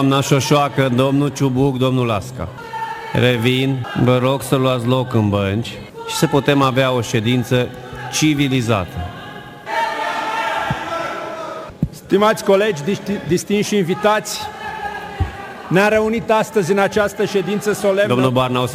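From start to finish the audio carries crude rate conversion. The pattern of errors fits a change from 48 kHz to 44.1 kHz done by simply dropping samples, with no filter. Those skipped samples recur in a fixed rhythm. They produce tones with no musical relation to the sound. The result is a gritty, inharmonic fizz that rides on loud and bright passages. It sits roughly 30 dB below the signal.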